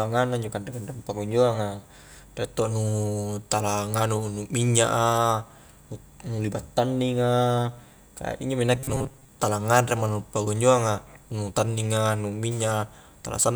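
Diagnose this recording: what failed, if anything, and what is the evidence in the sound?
Robotic sound from repeated short buffers, 8.75 to 9.29 s, between "injo mi" and "tala nganre mo nu". The speech turns into a rigid, metallic buzz at 133 Hz that still loosely follows the syllables. The stage is the driver or buffer. Fresh audio was likely arriving too seldom, so the path kept replaying a fragment of about 7.5 ms, one period of that buzz, in place of roughly half of the real signal, which was skipped.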